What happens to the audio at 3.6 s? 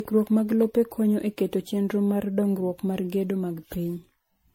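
At 3.6 s the speech still carries the generation loss present throughout the clip, likely from being decoded and re-encoded as MP3 around seven times, at a quality that fits 64 kbit/s. Each pass requantises on a shifted frame grid, so errors and spectral gaps pile up. The result is swirly, hollow and smeared, with blurred consonant onsets, and nothing above 16.6 kHz.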